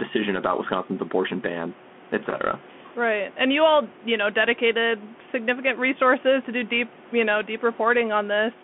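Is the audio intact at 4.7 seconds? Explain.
No. At 4.7 s the speech carries the Bluetooth CVSD headset codec damage that runs through the whole clip. CVSD codes each sample as a single up-or-down bit at a high rate with an adaptive step, which fits a 64 kbit/s stream. The band is squeezed to roughly 200 Hz to 3.4 kHz, so the sound is thin. Fast, loud high content outruns the step and distorts, s sounds turn scratchy, and a granular hiss sits beneath the speech, separate from room noise about 22 dB down.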